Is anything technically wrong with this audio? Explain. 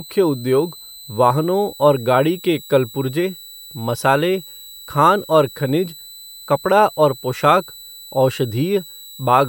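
Yes. A switching supply whistle runs throughout the speech. It comes from a switching power supply cycling at an audible rate, either in a light-load burst mode or by beating against a second supply, and that electrical noise is leaking into the audio path. It sounds like a thin, high whistle near 4 kHz, wandering between about 3.90 and 4.04 kHz, sitting roughly 20 dB below the speech.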